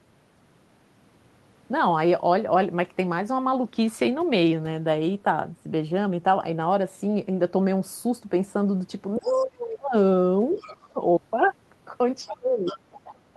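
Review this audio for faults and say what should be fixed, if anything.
A faint second voice slips in behind the speech three times: from 9.16 to 9.49 s and from 10.52 to 10.73 s at about 25 dB below the talker, then more clearly from 12.66 to 12.78 s at about 15 dB below. This is the other side's voice leaking through. The likely cause is that the device plays the far end on a loudspeaker and the echo canceller leaves part of that sound in the microphone signal.

Each time the leak appears, the talker's own voice drops away. From 9.18 to 9.95 s it sinks by about 30 dB at its lowest. From 10.54 to 11.01 s it falls by about 20 dB. From 12.25 s to the end it falls by about 25 dB. This is speech suppressed in double talk. With both sides talking at once, the canceller likely cannot tell the talker from the loudspeaker echo, so it turns both down.

To prevent both faults, use better double-talk detection and echo cancellation on the talker's device, or have the talker wear a headset so the far end never reaches the microphone.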